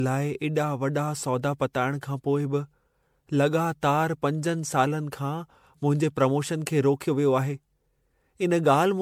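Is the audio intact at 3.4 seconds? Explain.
No. Generation loss runs throughout the clip, 3.4 s included. The speech sounds swirly, smeared and hollow, and consonant attacks blur, which points to repeated lossy coding, likely about seven rounds of MP3 decoding and re-encoding at a rate that fits 96 kbit/s. Each pass quantises again on a shifted frame grid, so noise and spectral holes accumulate beyond what a single encode would leave. Nothing is present above 19.9 kHz.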